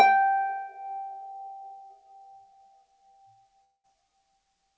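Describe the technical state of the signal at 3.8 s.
At 3.8 s you're inside a gap running from about 3.64 to 3.86 s, most likely a long network dropout. The last sound gets stretched into a fading buzz, then around 70 ms of silence, and roughly 200 ms of audio is simply gone when it resumes.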